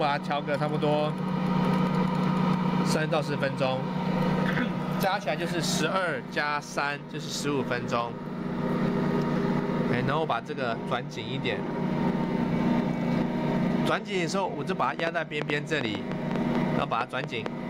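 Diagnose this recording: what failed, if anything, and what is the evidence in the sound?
A train of clicks runs from about 15.0 s to 17.47 s, near the end of the clip: roughly fifteen similar-shaped ticks at around 5.3 per second, unevenly spaced and sticking out well above the sound, maybe 15 dB or so. That irregular pulse pattern points to the analogue wiring stage, most likely interference from nearby equipment coupling into the line, or a faulty connection or power supply injecting the same glitch over and over.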